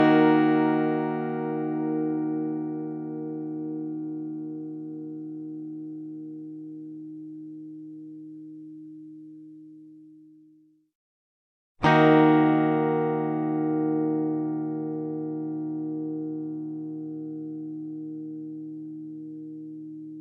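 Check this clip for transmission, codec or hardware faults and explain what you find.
No transmission, codec or hardware faults can be heard anywhere in this recording of sounds. Nothing in it calls for further explanation.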